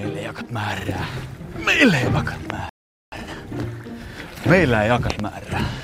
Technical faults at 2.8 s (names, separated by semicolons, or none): rebuffering stall